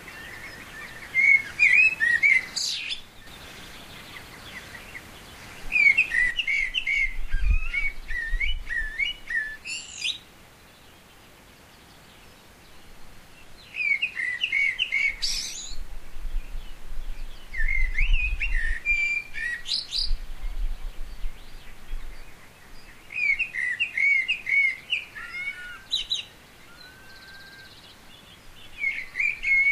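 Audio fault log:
2.59–3.27 s and 6.31 s to the end, one channel drops out: the level falls abruptly by about 6 dB and stays down through each span. This is likely one stereo channel going silent, so the mono sum carries shared content at half amplitude and loses anything present only in the missing side.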